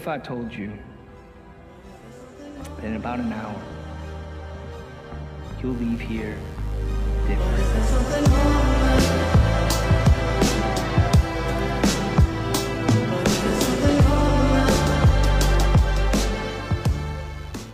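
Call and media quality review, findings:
Mains buzz, 5.67 s to end: steady raspy buzz, roughly 30 dB under the signal. Dimmer, rectifier or unshielded cable injecting switching spikes every 10 ms. Spectrogram: comb of 50 Hz harmonics into kHz range.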